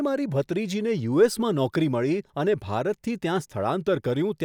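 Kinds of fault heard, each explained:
No technical faults can be heard in this speech recording. There is nothing to list under any kind of fault.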